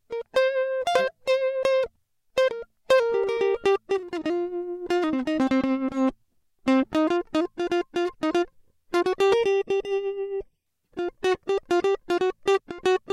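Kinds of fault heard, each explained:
Channel delay (comb filtering): from 9.34 to 10.66 s one channel lags by roughly 0.4 ms; summing cuts notches from about 1.5 kHz upward, leaving the music hollow.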